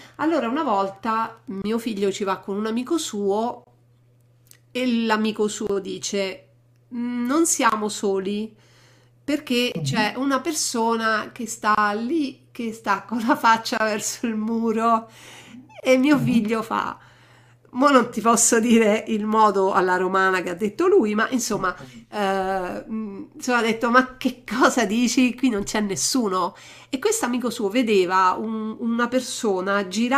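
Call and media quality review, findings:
Wi-Fi interference, 0.0 to 2.02 s: faint ticking well below the speech, regular at one tick per 102.4 ms, about ten per second. Probable component is an unshielded analogue input or mic preamp near a Wi-Fi radio, rectifying its beacon bursts. Unlike GSM buzz, which is a dense 217 Hz drone, this is a slower, distinct tick rate that matches a Wi-Fi beacon interval.

Gap at a join of encoded pieces, at 1.62 s (about 23 ms), then 3.64, 5.67, 7.70, 9.72, 11.75, 13.78 and 15.80 s (about 27 ms each): short silences with slightly smeared edges, recurring roughly every 2 s, after which the speech resumes where it stopped. Probable component is a segmenter or concatenation step that keeps each encoder run's start-up delay and last-frame padding. Unlike network packet loss, the spacing is regular, the lengths are nearly constant, and there is no concealment warble.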